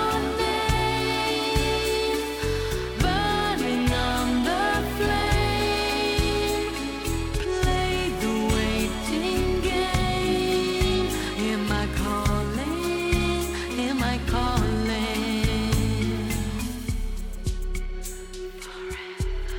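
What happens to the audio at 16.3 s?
At 16.3 s the sound carries periodic clock jitter, present throughout the clip. The converter's sampling clock wobbles at around 1 kHz, adding sidebands that roughen the sound with a metallic edge, strongest on high content. A spectrogram shows mirrored lines about 1 kHz either side of each component.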